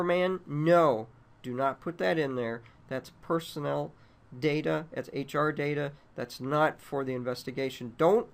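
No technical faults can be heard anywhere in the audio.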